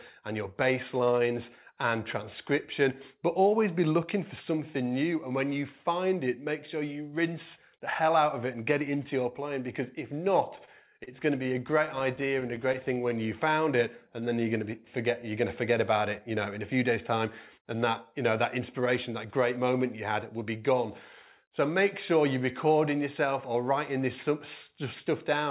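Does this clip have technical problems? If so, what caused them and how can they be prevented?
Yes. Repeated stalls (stutter) run from 10.56 to 12.98 s. Sixteen times the packets reached the receiver too late or too slowly, so its jitter buffer ran dry and it stretched the last sound to bridge each gap. Together these fills add 195 ms, about 8% of that stretch, and the longest lasts 30 ms. Nothing is actually lost, but the sound catches and drags in a rapid series of small hitches. Prevention: give the stream a steadier network route with less jitter, or a larger buffer margin.

A jitter buffer slow-down follows from 13.02 to 14.45 s. With its reserve running low, the receiver rebuilt it by repeating single pitch periods and fragments of pauses over and over. This inserts 126 ms and plays the passage at 92% speed with the pitch unchanged, so sounds are drawn out. Prevention: keep packet delivery steady enough that the buffer never runs that low.

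A jitter buffer speed-up runs from 16.36 to 19.58 s. By then the buffer held more audio than its target, as happens when late packets finally arrive in a burst. To shed the excess delay the receiver repeatedly cut out short pieces a pitch period or a few long. Roughly 150 ms goes, and the sound moves at 105% speed at the same pitch, slightly hurried. Prevention: smooth out the network jitter so packets do not pile up and then arrive together.

Throughout, the call path leaves nothing above 4 kHz, which fits G.711 mu-law at 64 kbps.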